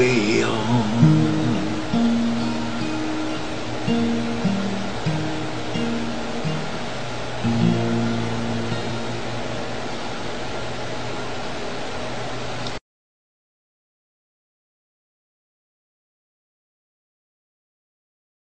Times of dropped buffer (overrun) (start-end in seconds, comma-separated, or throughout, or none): 0.43, 8.90, 12.52